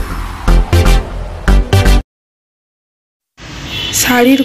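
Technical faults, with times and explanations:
3.96 to 4.41 s, hard clipping: the level is driven roughly 5 dB past what the signal path can carry, so every peak in this stretch is sliced flat. Those squared-off tops generate high harmonics, heard as crackle on the peaks.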